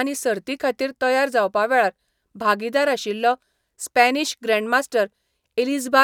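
Nothing stood out as a technical problem on listening to the speech.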